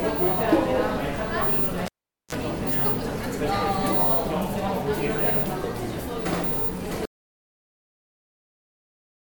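At 1.86 s the sound is interrupted by a cable pulled and plugged in. A sharp pop marks the disconnect, followed by roughly 444 ms of near silence. As the plug is pushed back and only the tip makes contact, a brief 36 ms burst of 60 Hz mains buzz appears, and a second pop brings the sound back at 2.35 s. On a waveform, the two pops are single spikes bracketing a flattened stretch. On a spectrogram, they show as thin vertical broadband lines, with short horizontal bands at 60 Hz and its harmonics just before the return.

From 7.05 s to the end of the clip there is an audio dropout to silence. The signal stops abruptly and never resumes, and the gap is truly empty, with no room tone or noise floor beneath it. The likely cause is lost input, with the recorder continuing to write silence. The waveform collapses to a flat line, and the spectrogram goes completely blank across all frequencies for the final 2.3 s or so.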